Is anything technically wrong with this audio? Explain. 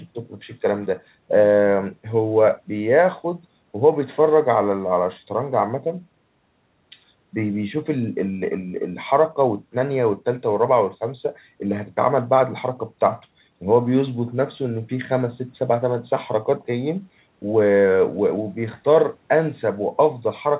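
No, nothing is technically wrong with this audio.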